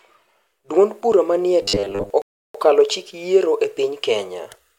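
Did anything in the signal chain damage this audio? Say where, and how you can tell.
Yes, two faults, both after capture. From 1.62 to 2.10 s the speech turns into robotic sound from repeated short buffers. It becomes a rigid, metallic buzz pitched at 100 Hz, and it only loosely tracks the speech. A fixed 100 Hz tone means a 10 ms block is being looped, so most of the real audio in that stretch is skipped. The likely cause is a driver or buffer stage that was starved of new data and kept replaying its last block.

At 2.22 s there is a rebuffering stall at the playback stage. The sound drops to silence until 2.55 s and then picks up exactly where it stopped, on "chik yiero e". No audio goes missing. Instead, 327 ms of dead air is inserted. The player ran out of downloaded data and paused until more arrived. You can tell it was a stall and not a dropout because the resumed audio is continuous with what came before the gap.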